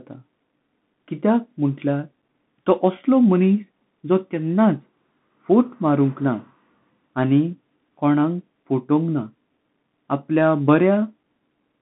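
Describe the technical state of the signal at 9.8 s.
At 9.8 s the speech carries Bluetooth CVSD headset codec damage, present across the whole clip. The one-bit delta modulation, which fits a 64 kbps link, confines the band to roughly 150 Hz–3.6 kHz with nothing above 3.8 kHz, leaving the speech muffled, with scratchy sibilants and a granular hiss.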